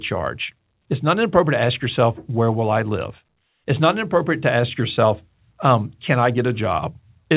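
No technical faults can be heard in this recording.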